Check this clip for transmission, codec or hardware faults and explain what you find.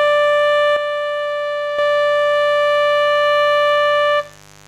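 Two faults stand out in this music clip: a mains buzz running the whole way through, and one channel dropping out for about a second near the start.

The mains buzz is a steady, raspy drone sitting well below the music, roughly 30 dB down, present from the first moment to the last. It comes from a 50 Hz supply. Sharp switching spikes from a dimmer, rectifier or poorly shielded connection enter the signal twice per mains cycle, so the interference is a dense stack of 50 Hz harmonics extending into the kHz range rather than a pure low hum.

The channel dropout runs from 0.76 s to 1.79 s. Over that stretch the music suddenly drops by about 6 dB, then returns just as abruptly. The likely cause is one stereo channel being lost before the signal was folded to mono. Material shared by both channels halves in amplitude, which accounts for the 6 dB step, and any parts that existed only in the missing channel vanish for that second.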